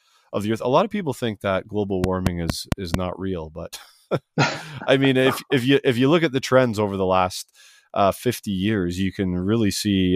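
Speech, with a train of clicks from 2.04 to 2.95 s, between "people think that global" and "not real but": about five evenly spaced ticks at 4.4 per second, peaking about 15 dB above the voice, likely from electrical interference. They appear as thin vertical broadband stripes and sharp waveform spikes.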